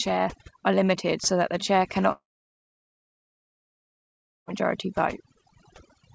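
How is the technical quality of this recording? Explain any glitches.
Quality is poor, with two faults. Overdone noise removal runs throughout: bands near the noise estimate are cut hard, leaving twinkly specks and a speckled, gappy spectrogram background. A long network dropout follows "so that the chair" from 2.12 to 4.49 s, likely from lost packets. A brief fading buzz or hiss gives way to silence, showing as a flat waveform and blank spectrogram, and the audio resumes with the missing part gone. The G.722 path explains why nothing appears above 8 kHz.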